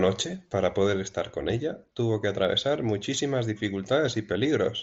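No faults to report: the speech arrives over a Bluetooth mSBC headset link, band-limited to 8 kHz as that codec is, with nothing beyond its usual light coding grain.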